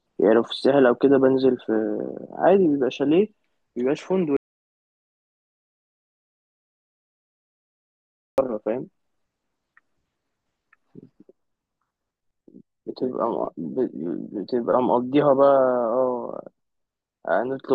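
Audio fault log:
4.37 to 8.38 s, audio dropout to silence: the speech cuts off mid-flow and returns after about 4.0 s of silence with no room tone. The input was likely lost while recording continued writing silence, so that stretch of speech is gone.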